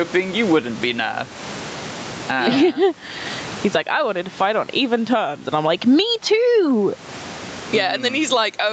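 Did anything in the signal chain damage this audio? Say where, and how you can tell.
Yes, there's gain pumping all the way through, and the likely cause is the input gain being set far too high and a fast limiter or compressor clamping down on every loud sound. The room noise sits normally about 34 dB under the speech, and the gain swings by around 20 dB. Loud and quiet parts end up squashed toward the same level.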